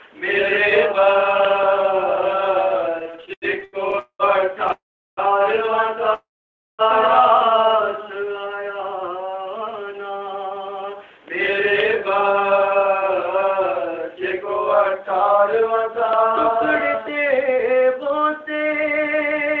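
From 2.99 s to 4.72 s the audio shows repeated stalls (stutter). Packets arrived late or too slowly, so the jitter buffer kept running dry. It happened 13 times, filling about 0.33 s in all, with the longest gap 90 ms. The receiver stretched the last sound across each gap, so about a fifth of that span is held-over material. Nothing is lost, but the flow catches and drags. A spectrogram shows short smeared or repeated slices breaking up the normal texture.

Inside that stretch and just after it come three call audio freezes, at 3.99–4.22 s, 4.72–5.20 s and 6.14–6.82 s. Each lasts longer than the one before: 205 ms, 451 ms and 649 ms. The likely cause is packets held up in transit, emptying the buffer. In each, the last sound carries on as a fading buzz and then falls silent for 80 ms, 380 ms and 540 ms. The audio then resumes where it stopped, so a gap has been inserted. The waveform shows a decaying tail and then a flat line.

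From 8.18 s to 8.62 s a jitter buffer slow-down plays the audio at 91% speed by repeating single pitch periods, adding 44 ms. Pitch stays the same while sounds draw out. On a spectrogram the harmonics keep their spacing but stretch sideways.

Two jitter buffer speed-ups follow. The first runs from 9.90 s to 14.17 s at 105% and removes roughly a fifth of a second. The second runs from 15.39 s to the end at 106% and removes roughly 0.3 s. Short pitch-period pieces are cut out over and over, so the sound hurries at unchanged pitch. Events sit slightly closer together on a spectrogram, with small seams where pieces were spliced. Throughout, the spectrum stops sharply at 8 kHz, which fits the G.722 codec at 64 kbps on the call path.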